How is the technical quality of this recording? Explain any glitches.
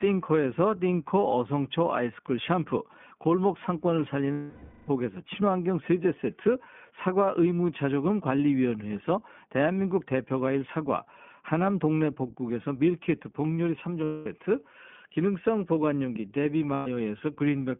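The quality is limited. The whole clip is coded with the iLBC codec, and there are three dropouts where frames were lost.

The iLBC codec runs through the entire recording. The line band runs from 150 Hz to 3.4 kHz, so the speech sounds thin and boxed in. The codec damage is plainly audible as a rough, synthetic edge on the voice. This narrowband VoIP codec codes each short frame's excitation on its own. The sound fits a 15.2 kbps mode with 20 ms frames.

Lost iLBC frames occur at 4.33 to 4.90 s (0.56 s), 14.04 to 14.27 s (0.22 s) and 16.74 to 16.88 s (0.12 s). Packets went missing and the decoder filled each gap. It repeated the last pitch cycle, mixed with noise, and let it fade as the loss continued. Each gap sounds like a held, buzzy or breathy vowel. Since frames stand alone, normal speech returns almost immediately afterward.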